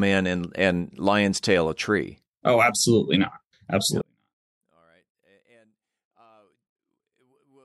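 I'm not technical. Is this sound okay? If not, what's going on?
No. From 4.01 s to the end, the speech almost disappears. The likely cause is one channel inverted, so the left and right cancel each other out.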